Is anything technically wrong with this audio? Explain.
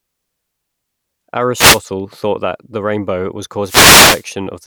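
Yes. Wireless microphone noise hits at 1.54–1.81 s and 3.63–4.25 s: the FM radio signal fades, and receiver noise rises into a swish of static over the speech.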